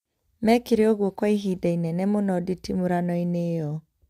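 No technical faults are audible anywhere in the speech.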